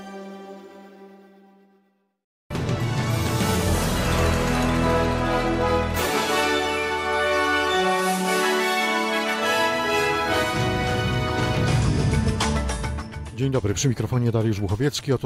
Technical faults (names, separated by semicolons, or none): none